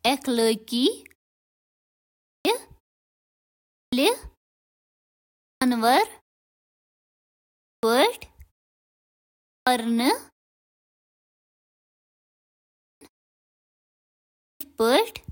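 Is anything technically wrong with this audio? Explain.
Yes. There is a clipped start after a pause at 2.15, 3.61, 5.26, 7.48, 9.35, 12.67 and 14.31 s. Each time, after a silence of roughly 0.9 to 2.4 s, the output device has gone idle and needs time to wake before it passes sound again. This swallows 0.29 to 0.36 s of the speech that follows, so words burst in abruptly without their opening sounds. On a waveform, each phrase begins mid-envelope with a sharp vertical edge rather than a rising onset. On a spectrogram, full-band energy appears suddenly after a blank gap, with no leading consonant energy. The muted pauses themselves, where the background drops to silence, don't cost any speech.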